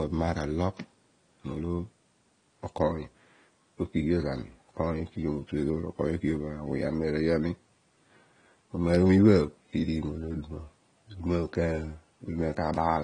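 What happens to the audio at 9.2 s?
At 9.2 s, as throughout the speech, the sound is dull and smeared, likely from AAC compression coarsely quantising frequency content at a low bitrate, around 32 kbps. A spectrogram shows a flat cut-off with nothing above 10 kHz.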